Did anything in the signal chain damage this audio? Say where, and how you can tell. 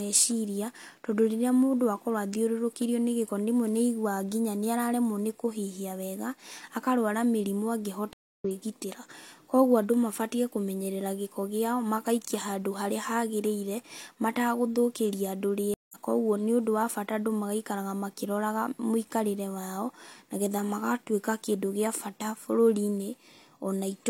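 Yes, two stream reconnects at the network stage. The connection dropped, leaving 271 ms of silence at 8.13 s and 168 ms at 15.74 s. Speech then resumes roughly a fifth of a second further on.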